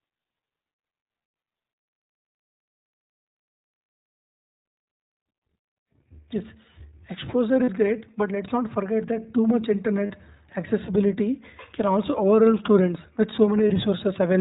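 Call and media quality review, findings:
iLBC codec, whole clip. Speech band-limited with nothing above 4 kHz; voice clear but rough and slightly synthetic, damage plainly audible. Narrowband VoIP codec coding each 20 ms frame's excitation independently of the previous frame. Coarseness fits the 15.2 kbps mode.

Lost iLBC frames, 1.24–1.26 s and 13.68–13.72 s (latter after "also overwhelm students with"). Brief held, buzzy vowel-like fill, fits one lost 20 ms frame. Decoder concealment repeating the last pitch cycle mixed with noise.

Lost iLBC frames, 7.64–7.70 s (before "great but let's not") and 10.06–10.12 s (between "forget that too much" and "accessibility can also overwhelm"). Longer sustained breathy fill, about 40 ms, fits two consecutive lost frames. Repeated pitch cycle fading. Voice recovers almost immediately because frames are self-contained.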